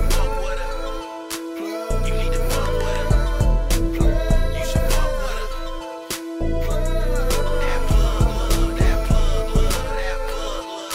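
No technical fault can be heard anywhere in this audio. There is nothing to time and no cause to point to.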